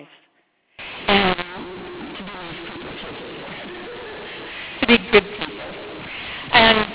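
From 0.79 s on, mu-law and A-law are mixed up: A-law samples read as mu-law turn harsh, and spectrogram pauses fill with broadband noise.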